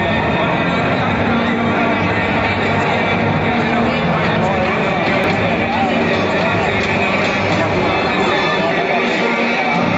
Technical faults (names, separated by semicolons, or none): dropped buffer (overrun)